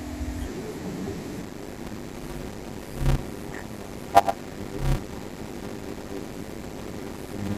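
From 1.41 s to the end, a padded block size mismatch kicks in: short blocks, which fit 256 samples, get zero-filled, so speech buzzes at 100 Hz and drags to 0.53× speed, timbre unchanged.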